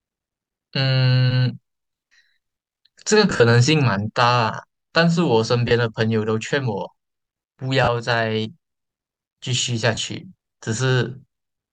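Lost LE Audio frames break the speech at 3.30–3.40 s (about 70 ms lost, longest run around 40 ms), 5.68–5.71 s, 7.84–7.88 s and 9.95–9.97 s. The LC3 decoder refills each gap with the previous spectrum under random signs, heard as brief noisy smears. Spectrograms show blurred, harmonic-less patches; waveforms show rough filler.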